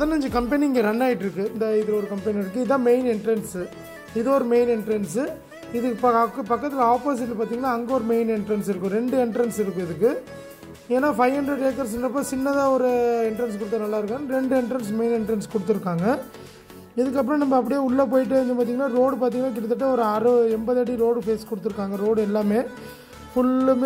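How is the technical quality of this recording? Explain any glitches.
No technical glitches can be heard anywhere in this recording. There is nothing in it that calls for an explanation.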